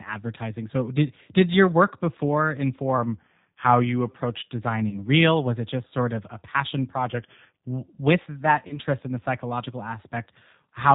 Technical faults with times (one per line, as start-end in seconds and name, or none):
0.00-10.95 G.729 codec
2.98-4.09 drift correction step
4.89-4.97 VoIP packet loss concealed by the speech codec
8.67-8.79 VoIP packet loss concealed by the speech codec